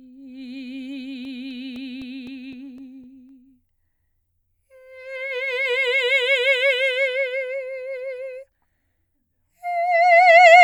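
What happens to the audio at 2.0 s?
Once per disc rotation, a scratch overwhelms error correction, so from 1.25 to 3.29 s the music has CD scratch ticks: nine brief clicks, the longest about 4 ms.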